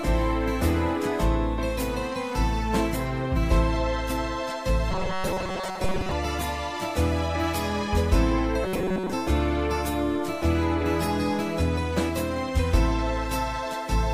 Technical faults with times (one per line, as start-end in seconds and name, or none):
4.91-6.12 robotic sound from repeated short buffers
8.64-9.13 robotic sound from repeated short buffers